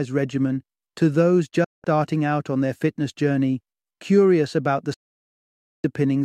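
At 1.64 s the sound fades out over about 8 ms into a silent hole lasting until 1.85 s, roughly 0.2 s, then resumes. A second, longer gap runs from 4.94 s to 5.85 s, nearly 0.9 s. Both are digital broadcast dropouts: the receiver muted while frames failed, which fits blocks of 32 ms, and programme material from those spans never returns. On a waveform each appears as a sharp taper to a flat line; a spectrogram shows clean full-band vertical gaps.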